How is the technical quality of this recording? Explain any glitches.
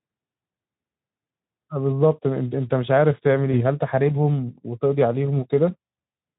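There is one glitch in this Speex-coded speech. From 3.51 to 3.61 s, VoIP packet loss is concealed by the speech codec. One 20 ms packet went missing, and the decoder extended its last pitch and filter at falling gain. Unlike a dropout, there is no silence. The sound smears into a fading buzz or coloured noise and stays weak for about 80 ms afterwards, because each frame builds on the last.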